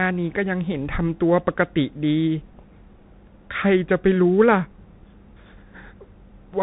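From start to finish the speech has passed through a Bluetooth CVSD headset codec, which encodes each sample as a single up-or-down bit with an adapting step, a sound that fits a 64 kbps link. Nothing above 3.8 kHz survives, so the speech sounds boxed and phone-like. Where the level climbs steeply the step size can't keep pace, leaving s sounds scratchy and distorted, with a grainy hiss running beneath the speech throughout.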